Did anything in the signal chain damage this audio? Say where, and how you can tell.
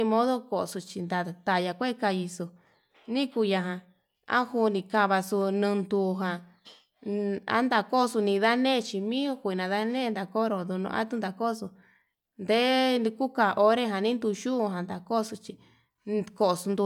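No, nothing in the signal chain audibly damaged this speech.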